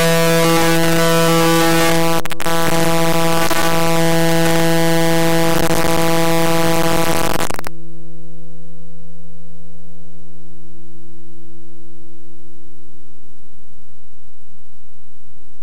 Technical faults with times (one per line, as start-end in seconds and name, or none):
0.00-15.62 signed and unsigned mixed up